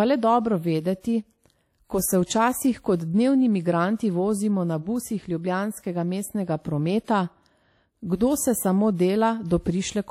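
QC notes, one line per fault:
Throughout, WMA compression: the speech has a ringing, washy quality, with a hiss that swells and fades with the signal and smears across tens of milliseconds around each sound, and nothing is present above 15.9 kHz. This is likely transform coding by an early Windows Media Audio encoder at a low bitrate, roughly 48 kbps, whose long blocks spread quantisation noise in time while weak spectral lines are zeroed and the top band is cut away.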